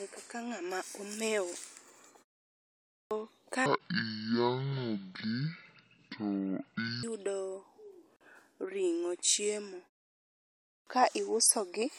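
Clipped start after a pause at 2.76 s: after about 0.6 s of silence, the output device has gone to sleep and is still waking, so roughly 0.35 s of speech is swallowed. The sound begins abruptly at 3.11 s, missing its opening.

A section at the wrong speed runs from 3.66 to 7.03 s. It plays at 0.55 times its recorded speed, which drops the pitch by about ten semitones, so the speech turns deep and dragging. The likely cause is an editor or player fitting this section to the wrong clock.

A gap at a join of encoded pieces opens from 8.16 to 8.21 s, just before "ring'o chiemo". The pieces were encoded separately and joined untrimmed, leaving the encoder's start delay and end padding in place. This cuts a 44 ms gap with smeared edges into continuous sound, and the speech then resumes where it stopped.

The clipped start recurs at 10.53 s, just before "ka iuso gi to". After a 0.72 s pause, the waking device loses about 0.34 s, so speech breaks in abruptly at 10.87 s.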